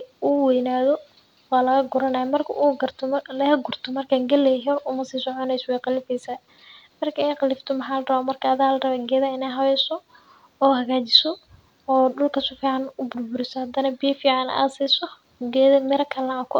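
Speech recording; no technical faults detected on listening.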